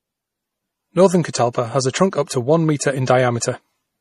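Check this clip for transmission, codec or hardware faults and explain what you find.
One codec fault runs through the whole speech clip: likely MP3 compression. Nothing sounds above 13 kHz, and weak spectral detail flickers between frames, giving a plainly audible watery, swirly texture that fits a bitrate around 40 kbps.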